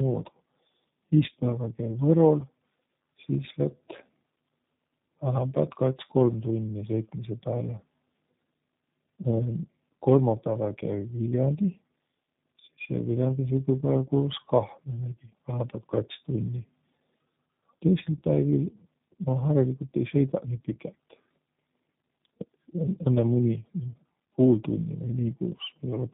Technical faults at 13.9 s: tandem speech coding

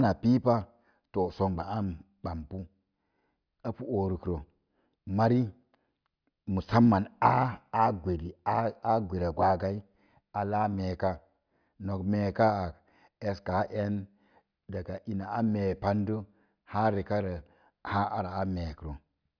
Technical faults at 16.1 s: none

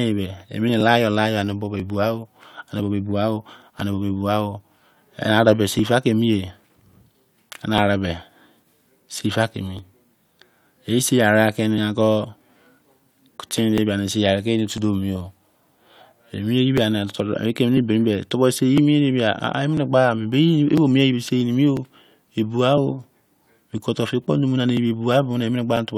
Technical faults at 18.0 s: periodic USB or driver dropouts

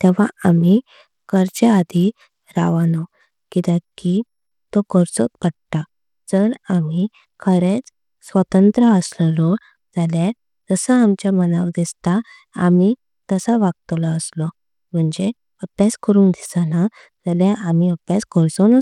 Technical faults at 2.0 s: Bluetooth SBC compression

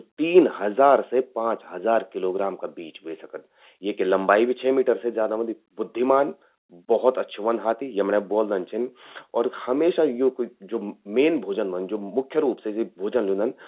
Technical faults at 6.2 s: none

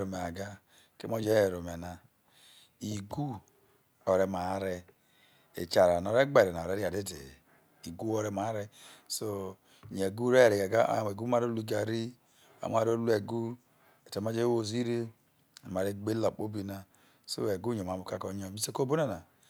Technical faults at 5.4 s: none

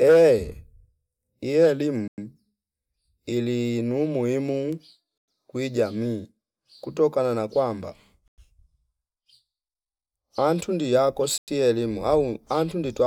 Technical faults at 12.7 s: none

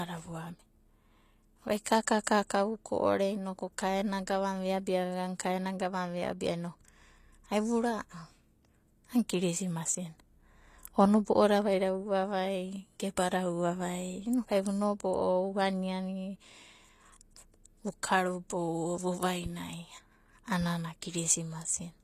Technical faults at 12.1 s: HE-AAC compression

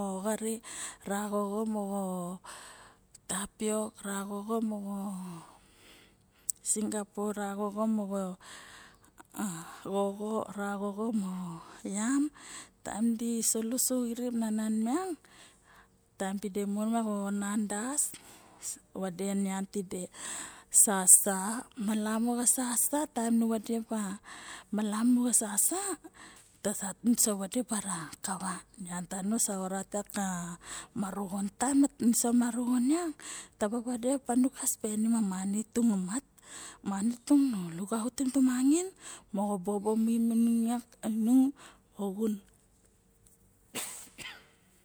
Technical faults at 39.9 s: none

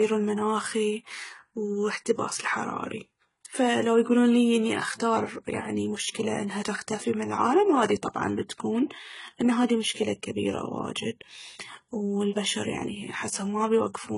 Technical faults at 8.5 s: transcoding between lossy codecs

